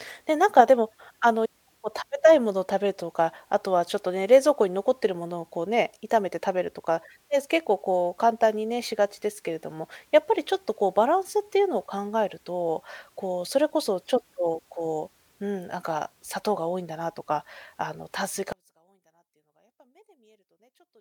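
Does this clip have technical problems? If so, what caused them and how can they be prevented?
Yes. From 18.52 s to the end at 21.01 s, the speech drops by about 36 dB to a small residue. The likely cause is one channel inverted, so the shared sound cancels when both channels are summed to mono. Prevent it by checking each channel's polarity before folding stereo down to mono.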